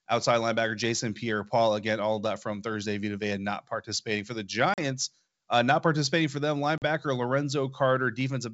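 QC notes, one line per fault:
4.74–4.79 s and 6.78–6.85 s: packet loss on an ADPCM call, after "not participating for the" and "not participating for them". Each leaves a hard-edged 40 ms silent hole, about two packets. Afterwards the G.722 decoder's predictor and step size disagree with the sender's, so speech resumes with brief, slight distortion.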